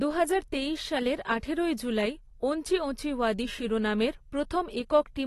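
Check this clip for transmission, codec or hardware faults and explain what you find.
Two faults: the whole clip sounds lossy-coded, and there's one smeared attack early on.

Throughout, the speech is dull and smeared, with nothing above 12.4 kHz and plainly audible codec damage. That's likely AAC compression, where the encoder drops the top band and coarsely quantises the rest, which fits a low bitrate around 32 kbps.

At 1.77 s, between "দুহাজার তেইশ সালের আঠারোই" and "জুলাই ওঞ্চি ওঁচি ওয়াদি", there's pre-echo: a hiss about 14 ms long just ahead of a sharp onset. The block's quantisation noise, sized for the loud attack, leaks into the quiet gap before it, so the attack sounds softened.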